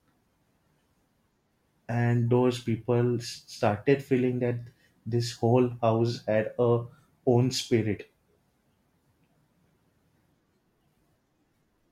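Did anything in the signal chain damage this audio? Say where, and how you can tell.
No, nothing in the chain from capture to playback audibly damaged this speech recording.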